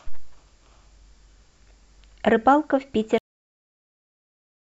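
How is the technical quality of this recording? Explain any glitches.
The recording has one clear fault: a cut-off end. At 3.18 s the speech stops mid-sound and drops straight to digital silence. That silence runs to the end of the clip. There is no decay and no natural tail. The final stretch of audio was never written to the file or played out. Whatever was still buffered at that moment was lost. The result sounds like the recording was chopped off, not finished.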